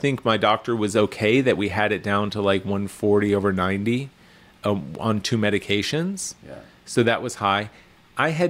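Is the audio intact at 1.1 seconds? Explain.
Yes, the audio is intact at 1.1 seconds, with no dropout, click, distortion or other fault at that moment.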